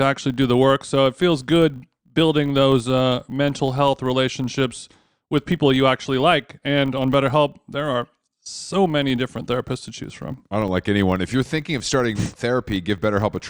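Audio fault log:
Throughout: filter restarted on every block. A steady 50 Hz buzz rides along with the speech, rising and falling with its loudness and dropping away when the level drops. It points to processing in blocks of 20 ms, with a filter that loses its stored state at each boundary and restarts from silence. Each block therefore opens with a brief transient, and fifty of these per second fuse into the buzz.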